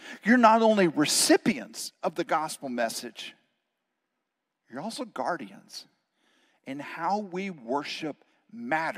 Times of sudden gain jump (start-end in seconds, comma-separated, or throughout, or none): 1.52-8.97